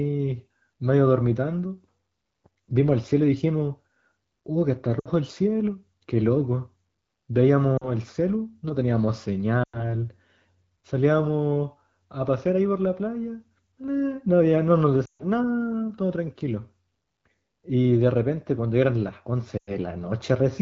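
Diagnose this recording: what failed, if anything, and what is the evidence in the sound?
Lost AMR speech frames on the radio link: at 4.99, 7.77, 9.63, 15.06 and 19.57 s the speech drops to near silence within two frames, over lost runs of 40 to 140 ms, as the decoder repeats the last good frame with falling gain. Unlike a hard dropout, it fades and decays rather than cutting off.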